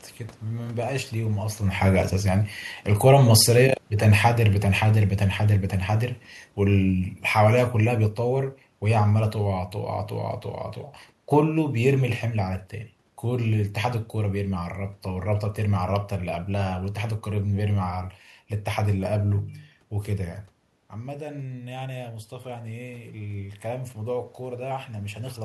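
Automatic gain falling, 1.19 to 9.63 s: as the talker moves, the control gradually cuts gain by about 10 dB, pulling room noise down too. Automatic gain rising, 21.02 to 25.4 s: after the talker moves back, the input drops about 12 dB, and the control slowly adds about 6 dB, so voice and room noise swell together.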